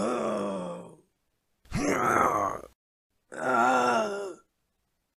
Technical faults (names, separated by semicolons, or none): none